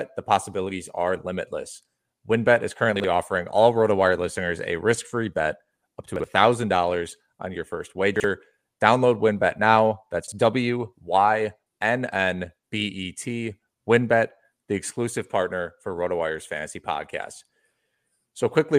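Brief jumbled stutters break the speech at 2.96–3.04 s just before "offering all", at 6.16–6.24 s after "free bet up to", at 8.16–8.24 s after "on your first", and at 10.24–10.32 s. Each is chunks out of order: a 40 ms chunk arrives one chunk late, swapping places with its neighbour and leaving hard joins.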